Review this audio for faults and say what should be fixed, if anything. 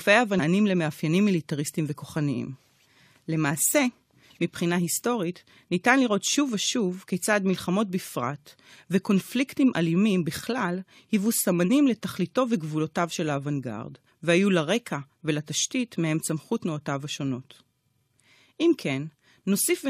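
Damaged data in a compressed stream shows up in the speech from 0.38 to 0.40 s. The disturbance lasts about 20 ms. Part of the encoded data there is wrong. The decoder cannot read those frames correctly, so it loses sync and searches for the next valid frame header before playback continues. That resync is what breaks the audio at this point. Protect the stored or transmitted file with checksums and error correction, and re-fetch any segment that fails verification.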